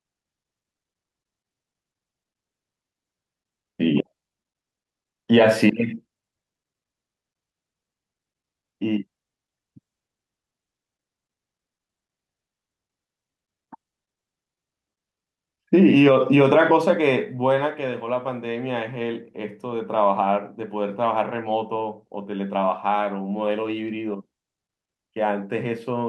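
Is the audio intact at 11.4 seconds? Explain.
Yes, the audio is intact at 11.4 seconds, with no audible fault at that moment.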